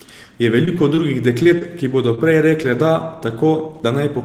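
From 0.65 to 0.99 s there's a stretch of repeated packet loss, the robotic-sounding kind. Four separate holes open up in about a third of a second, the longest around 25 ms, and each one gets patched by stretching the last bit of speech forward. Roughly a sixth of that span is fill rather than real audio, so it comes out choppy, with slivers of the speech just gone.

After that you get four isolated cases of short concealed packet loss, at 1.43 to 1.47 s, 1.59 to 1.63 s, 2.15 to 2.29 s and 2.63 to 2.71 s. Each time about 20 ms of the call never made it to the decoder in time, and the receiver papered over the hole by continuing whatever was sounding, then blending back in. You hear a quick smear or wobble. The last two also stretch things slightly, by roughly 10 ms and 7 ms.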